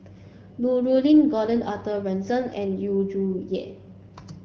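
No technical faults can be heard anywhere in the speech. The AMR wideband (HD Voice) codec path leaves only a light coded character on the sound, which fits a rate of around 12.65 kbit/s.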